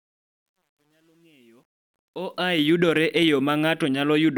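Gritty grain marks the fade-in from 0.0 to 2.63 s, worst before 1.92 s, clearing by "yudore e yo". This is truncation distortion on a fade, which fits an undithered 10-bit gain stage.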